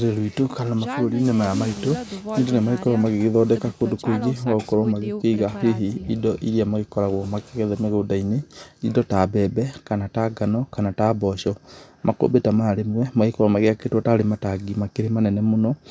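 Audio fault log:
No technical faults detected.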